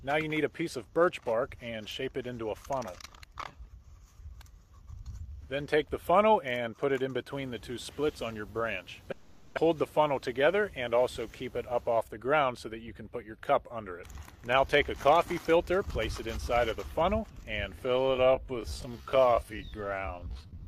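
From 9.11 to 9.59 s a long network dropout likely cut the stream. The receiver filled about 460 ms with a fading continuation of the last sound, and about 400 ms of real audio never returns. From 10.19 to 10.62 s a jitter buffer speed-up drains the roughly 40 ms of extra delay by clipping out pitch-period pieces, so the audio runs about 108% fast at unchanged pitch and sounds hurried. From 17.83 s to the end, the audio was likely time-stretched in software to about 0.57 times speed. The pace drops abruptly while the pitch holds, leaving that closing stretch dragging.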